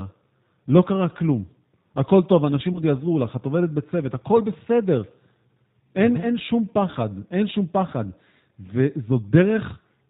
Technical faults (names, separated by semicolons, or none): G.729 codec; VoIP packet loss concealed by the speech codec